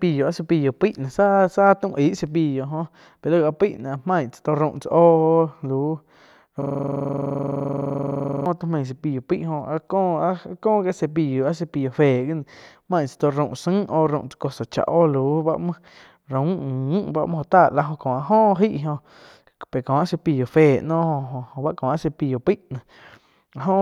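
From 6.62 to 8.46 s the sound locks into a rapid, mechanical stutter, a rough buzz pulsing about 23 times per second as one fragment of about 43 ms repeats identically more than forty times. This is a system hang loop. The computer or driver stalled, but the audio hardware kept replaying the same ring buffer. A loop of that length fits a 2048-sample buffer.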